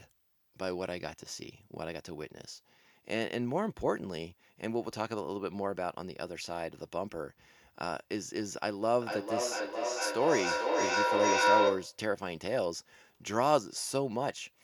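A microphone-to-loudspeaker loop that gains level on every pass causes feedback howl from 9.01 to 12.05 s. The repeats build instead of fading, narrowing to a tone near 1 kHz that pulses roughly every 400 ms and peaks about 5 dB above the speech.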